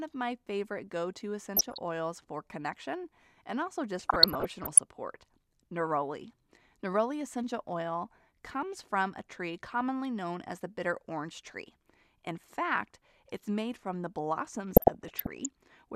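DAB burbling hits at 1.57–1.78 s after "my favorite go to", 3.99–4.79 s after "for connection and also", and 14.71–15.46 s. Uncorrected bit errors corrupt MP2 sub-band samples, making short blips of noise in single sub-bands. A spectrogram shows scattered bright blocks in isolated bands.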